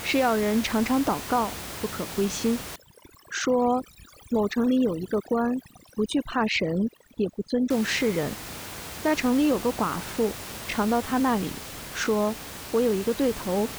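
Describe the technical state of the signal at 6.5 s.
At 6.5 s the speech sits inside a stretch of overdone noise removal running from 2.76 to 7.70 s. An over-aggressive noise reducer is pulling individual frequency bands down or out wherever they approach its noise estimate. The background drops and breaks up into twinkling specks, and the quieter parts of the voice are taken with it. The room noise, about 13 dB below the speech, is ordinary recording ambience.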